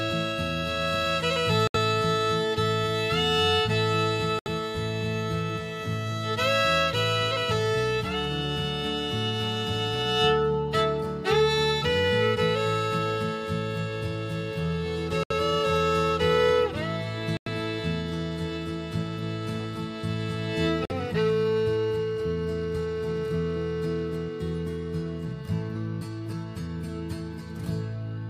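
Abrupt holes of silence cut in at 1.67–1.76, 4.39–4.47, 15.23–15.31, 17.37–17.48 and 20.85–20.92 s: corrupt frames muted after damaged compressed frames were rejected, timing intact.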